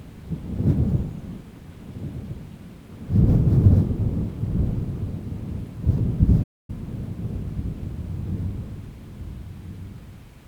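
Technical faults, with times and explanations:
6.43–6.70 s playback stall: the sound halts into full silence for about 250 ms, likely from a starved or blocked player, one long pause unlike brief repeated dropouts.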